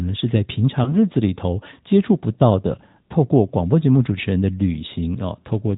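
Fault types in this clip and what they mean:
AMR narrowband mobile codec: The whole clip passes through the 2G and 3G mobile speech codec. Nothing above 4 kHz survives, so the speech sounds boxed in. Damage is plainly audible, with a buzzy, synthetic edge that fits a mid rate near 10.2 kbps.
Lost AMR speech frames: At about 0.84 s, a single 20 ms frame goes missing. The decoder fills the gap by repeating the previous pitch and vocal tract settings at lower gain. This is heard as a brief dip or warble before the speech recovers.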